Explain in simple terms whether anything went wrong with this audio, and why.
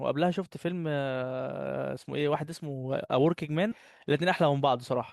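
Something did go wrong, at about 3.71 to 3.76 s. The speech suddenly jumps forward with a small blip, as if a chunk was cut out. That's most likely a stream segment skipped: one piece of the stream never arrived, so the player moved on to the next.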